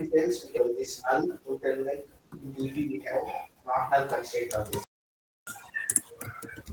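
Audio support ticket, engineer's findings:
Skip ahead, 0.57–0.59 s: about a second of speech is missing and the two sides are butted together with no fill or gap. A stretch was dropped in transit or by the jitter buffer while later packets were already queued, so playback jumped forward and latency fell by about a second.

Jitter buffer speed-up, 1.26–2.20 s: speech runs at 107% speed with unchanged pitch and sounds slightly hurried. The buffer sat above its target depth and trimmed repeated pitch-period-sized slices, around 70 ms in total, to bring delay back down.

Playback stall, 4.84–5.47 s: output goes silent mid-speech for about 630 ms, then resumes. Likely a buffer underrun or a blocked audio thread in the player, which starved the output device until data returned.

Catch-up at higher speed, 5.47–6.63 s: immediately after the stall, speech plays at 1.5x with pitch raised by about seven semitones, then returns to normal. 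The player resampled its accumulated backlog to recover the lost time, so speed and pitch rise together.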